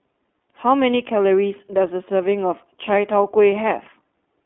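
A short speech clip that's been through the iLBC codec end to end, and you can plainly hear it. The band sits at roughly 250 Hz to 3.4 kHz, so it has that thin phone-line quality. On top of that there's a slightly rough, synthetic edge, and iLBC codes the excitation for each frame on its own. The texture fits the 20 ms frame mode at about 15.2 kbps. There's also a lost iLBC frame right around 0.42 s, a single 20 ms dropout. The decoder covers it by repeating the last pitch cycle with some noise mixed in, so instead of a silence you get a brief held, faintly buzzy blip. Since iLBC frames don't depend on the one before, the sound snaps back to normal immediately after, with no lingering smear.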